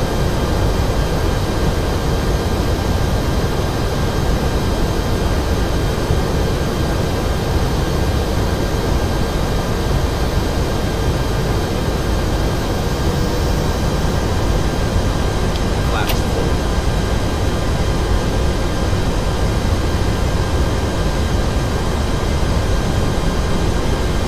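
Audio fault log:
19.32–23.41 s train of clicks: around forty near-identical sharp pulses, unevenly spaced at about 8.3 per second and peaking about 5 dB above the sound, heard as ticking over it, likely from interference from nearby equipment or a faulty connection or power supply injecting pulses.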